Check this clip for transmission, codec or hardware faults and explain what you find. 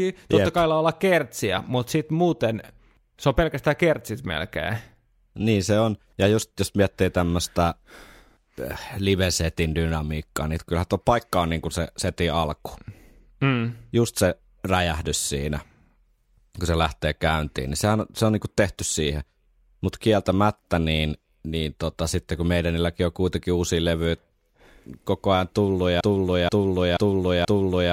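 One fault is present: a broken-record loop. From 26.01 s, just after "koko ajan tullut", a 0.48 s speech fragment repeats exactly, back to back, four times until the end. The stream likely stalled and kept resending its last fragment. The speech due then is lost.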